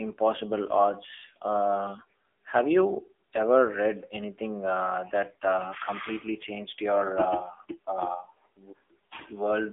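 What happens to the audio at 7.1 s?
At 7.1 s the speech carries the same AMR narrowband mobile codec damage heard throughout the clip. The sound is confined to a telephone band of roughly 300 Hz to 3.5 kHz, with nothing above 3.7 kHz. The codec rebuilds the voice from a vocal-tract filter excited by sparse pulses each frame. The heavy buzzy, synthetic coloration suggests a low AMR-NB mode around 6.7 kbps.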